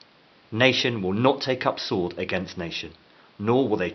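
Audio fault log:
The speech signal shows no technical faults, with only a faint room noise sitting about 33 dB below the voice level.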